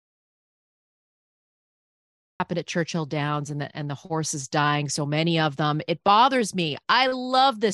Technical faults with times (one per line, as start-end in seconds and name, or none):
0.00-2.40 audio dropout to silence